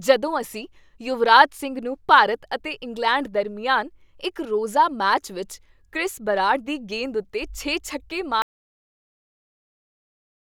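At 8.42 s the speech just cuts out mid-flow and the rest of the clip is dead digital silence, with no room tone at all. That's an audio dropout to silence, likely the input dropping away while the recorder kept writing silence.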